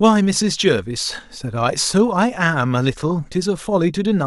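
Speech recording with no audible technical faults found anywhere in the clip.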